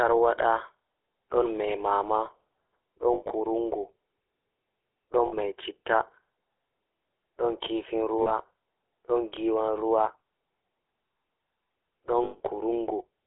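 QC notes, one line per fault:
Throughout: GSM full-rate codec. The speech carries that buzzy, gravelly roughness from modelling the vocal tract and driving it with a coarse, regular pulse excitation, which fits the 13 kbps full-rate coder. The line is limited to 250 Hz to 3.6 kHz, so it sounds thin and boxy.
3.14–3.32 s, 5.26–5.34 s, 8.22–8.32 s, 12.24–12.41 s: lost GSM frames. Each gap is patched by repeating the last good frame, so the sound hangs on as a brief metallic ring. About 120 ms is lost in scattered bits across 160 ms at 3.14 s, with the longest run around 70 ms. The later gaps lose 60 ms, 40 ms and 160 ms.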